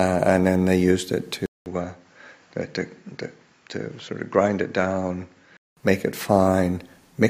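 At 1.46 s the sound cuts out for about 200 ms, then returns duller and boxier, with nothing above 7.6 kHz, roughly 5 dB quieter, and with a faint new hiss well below the signal. Full bandwidth comes back at 5.77 s. The likely cause is an input switched to a poorer device. A bandwidth-limiting filter or codec change would dull the sound without adding the gap, level drop and separate noise floor.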